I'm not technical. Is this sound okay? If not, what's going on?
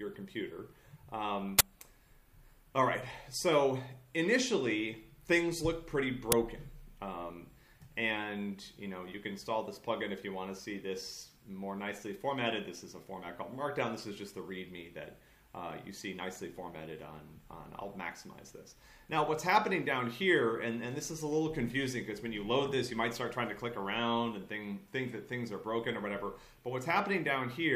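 No. There are two uninitialised buffer bursts, at 1.59 to 1.61 s and at 6.32 s. The system played a chunk of memory before any real audio had been written to it, so you hear a sudden loud crack.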